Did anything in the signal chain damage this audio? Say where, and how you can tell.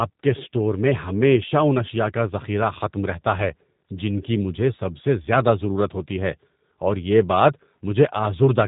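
Yes. A G.729 codec is at work throughout the clip, at the codec stage. The speech has a slightly rough, synthetic edge, and nothing sits above about 3.8 kHz. That texture fits an 8 kbit/s speech codec that doesn't transmit the waveform at all. It sends a vocal tract filter, a pitch predictor and a handful of pulses for each 10 ms frame, and the decoder rebuilds the speech from those parameters. The damage is plainly audible, and the sound points to the G.729A variant.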